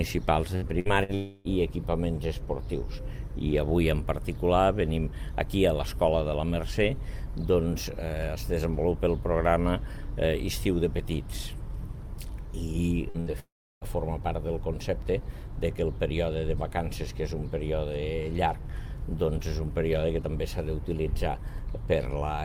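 From 0.55 to 1.11 s, repeated packet loss (robotic sound) makes the audio choppy. Three gaps, about 180 ms in total and up to 63 ms each, are patched by repeating the last sound. On a spectrogram these show as short smeared, stretched harmonic blocks. At 1.14 to 1.48 s, the likely cause is a long network dropout. About 300 ms never arrives and is filled throughout with a droning continuation, which appears as a flat, fading band with no silence. The pattern returns from 13.09 to 13.37 s, with three gaps of up to 60 ms concealing nearly half the span. Then from 13.40 to 13.84 s, about 420 ms is lost. A brief buzzing tail gives way to roughly a third of a second of near-flat waveform before the sound resumes.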